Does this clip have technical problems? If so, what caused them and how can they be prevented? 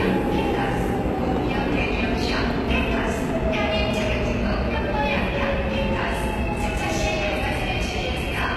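Yes. Throughout the clip the treble sounds bright but gritty and metallic, with nothing above 12.3 kHz. This is likely HE-AAC compression at a low bitrate, around 16 kbps. Its band replication rebuilds the treble from lower bands, which sounds synthetic rather than dull like a plain low-pass. Encoding at a higher bitrate with standard AAC prevents it.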